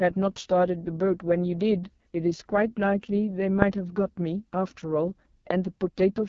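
From start to end the speech carries heavy AMR wideband (HD Voice) codec damage: a rough, raspy buzz from the pulse-driven vocal tract model, which fits its lowest 6.6 kbit/s mode. Unlike narrowband telephone coding, the band extends to about 7.4 kHz, with hissy shaped noise at the top.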